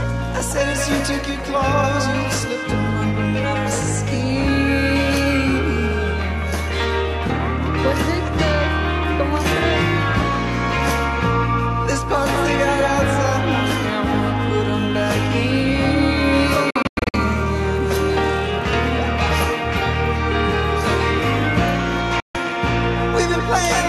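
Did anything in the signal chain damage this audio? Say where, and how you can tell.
Yes, at the reception stage: digital broadcast dropouts. From 16.70 to 17.14 s the audio mutes in short holes totalling 264 ms (longest 96 ms), each cut with a 3 ms fade; at 22.20 s a 144 ms mute follows. The receiver silenced corrupted frames, losing that programme.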